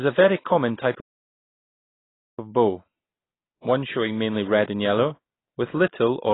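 Throughout, the speech has nothing above 3.9 kHz and sounds dull, smeared and warbling. This is likely heavy AAC compression, consistent with AAC-LC at around 16 kbps.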